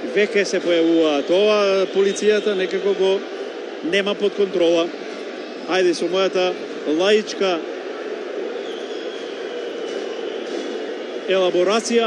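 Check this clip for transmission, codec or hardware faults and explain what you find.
No transmission, codec or hardware faults can be heard anywhere in the recording, and the signal holds steady throughout.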